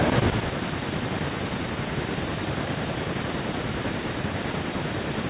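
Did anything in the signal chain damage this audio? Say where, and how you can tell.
Yes. Around 0.98 s the speech lurches forward, joining again by 1.09 s with no gap, and roughly 0.4 s of speech is missing. This skip ahead comes from the network or jitter buffer stage, which discarded a stretch while later audio was queued.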